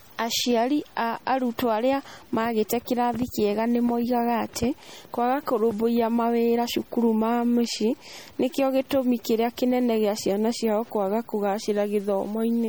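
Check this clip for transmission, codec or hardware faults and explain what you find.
Two faults run through the whole speech clip: a stuck bit and plainly audible MP3 compression.

Stuck bit, throughout: the likely cause is one data bit held fixed, so about half the sample values are off by its weight. Noise fills the pauses, which sets it apart from steady hiss.

MP3 compression, throughout: this likely comes from low-bitrate MP3 encoding, around 48 kbps, where weak frequency lines drop out frame by frame. The result is watery, swirling artefacts and smeared attacks, not simply a duller top end.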